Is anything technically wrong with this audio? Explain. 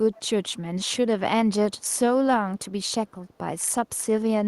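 Yes. From 0.13 to 0.2 s there is an echo leak: a faint, delayed copy of the speech, arriving about 221 ms after the original and sitting roughly 30 dB below it. The likely cause is a far end on loudspeaker whose echo canceller let some of the returned audio slip through. What sets it apart from room reverberation is the clean gap before a distinct repeat; reverb would be a smooth tail starting immediately.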